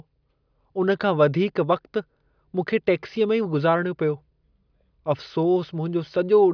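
Speech recording with no technical fault audible anywhere in it. There is nothing in the signal that calls for a time or a cause.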